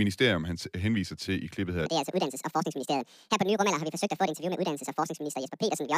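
Speech with a section at the wrong speed from 1.86 s to the end: it runs 1.81 times fast and about ten semitones high, likely from a clock mismatch.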